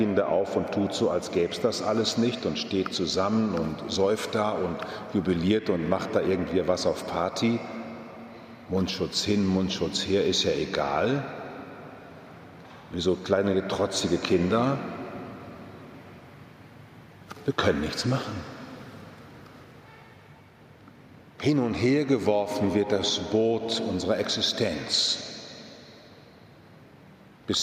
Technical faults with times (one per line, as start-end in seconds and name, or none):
none